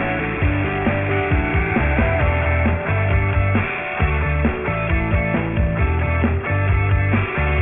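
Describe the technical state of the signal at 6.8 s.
At 6.8 s, like everywhere else in the clip, you're hearing aliasing. The sound was dropped to a much lower rate, which fits a 6 kHz sample rate, without filtering first, so everything above 3 kHz folds back down below that point. The folded content lands on unrelated frequencies only around 10 dB under the real signal, giving a gritty, metallic edge and a spectrum jammed right up against 3 kHz.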